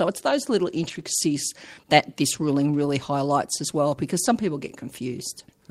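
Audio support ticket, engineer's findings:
Lost packet rebuilt from error correction, 0.83–1.01 s, right after "it's those little". Rough, noisy patch with no dropout; decoder likely played low-bitrate redundant copies (Opus in-band FEC). Waveform continuous, no gap; spectrogram shows smeared, grainier texture across the segment.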